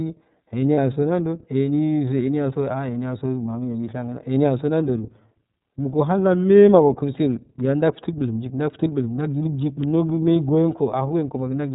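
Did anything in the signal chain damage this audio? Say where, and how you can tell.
Yes. The damage happens at the codec stage. The whole clip is narrowband, with nothing above 4 kHz, and the speech has a plainly audible rough, slightly synthetic edge. That points to the iLBC codec, and the coding character fits its 13.33 kbps mode with 30 ms frames. A simple low-pass filter would also remove the top end but would leave no buzzy texture. iLBC codes each frame's excitation on its own.

At the network stage there are lost iLBC frames, from 0.75 to 0.78 s, just before "so nando". For about 30 ms, which fits one lost frame, the sound turns into a short held, faintly buzzy vowel. The decoder fills the gap by repeating the last pitch cycle mixed with noise. A plain dropout would be silent or clicky instead. Because iLBC frames don't depend on earlier ones, the speech returns cleanly at once, with no slow recovery afterward.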